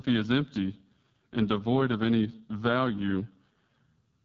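Speech, carried for its full length through the AMR wideband (HD Voice) codec and heavily damaged by it. The voice sounds rough and raspy, which fits the lowest 6.6 kbit/s mode: at that rate the pulse-excited vocal tract model has too few bits to follow the waveform closely. Content is coded only up to 6.4 kHz, with synthetic shaped noise filling the band above, and nothing is present beyond 7.5 kHz.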